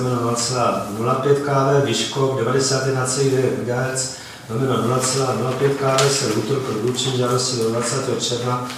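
No technical fault can be heard anywhere in the audio.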